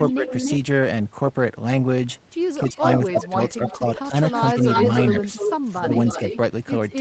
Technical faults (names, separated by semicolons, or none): echo leak; speech suppressed in double talk